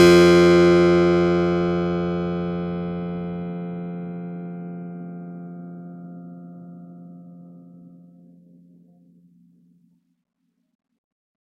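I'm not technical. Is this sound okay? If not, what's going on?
Yes, this piece of music comes across as technically sound, with nothing in the signal that points to a problem in how it was recorded, processed or delivered.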